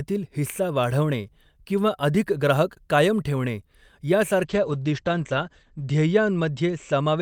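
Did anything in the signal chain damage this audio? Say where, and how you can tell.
Yes: a call bitrate drop in the codec from 4.51 s to the end. Highs above 8 kHz vanish and speech turns coarse, matching the encoder falling from about 48 to 14 kbps.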